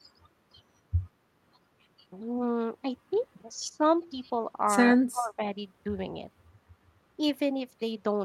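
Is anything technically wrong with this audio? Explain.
Yes. Echo leak at 3.13 to 3.18 s: a very faint copy of the speech returns about 140 ms late, likely from a loudspeaker echo the far end's canceller left behind.

Speech suppressed in double talk at 3.69 to 3.85 s, 4.92 to 5.41 s and 7.17 to 7.22 s: the voice ducks, deeply at 4.92 s, only slightly at 7.17 s, likely because the canceller mistook overlapping talk for echo.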